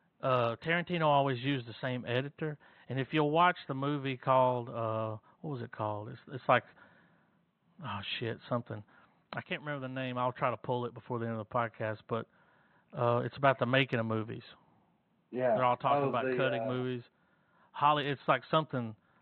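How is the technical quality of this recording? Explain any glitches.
No glitches or technical faults can be heard anywhere in the recording. The only thing under the speech is a faint room noise from where the microphone sits, about 52 dB below the speech level.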